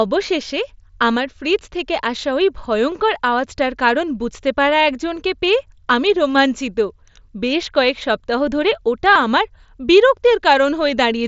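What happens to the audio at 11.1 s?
Nothing goes wrong at 11.1 s: the speech carries on intact through the Bluetooth mSBC headset link, with only the light grain that codec leaves on louder sounds.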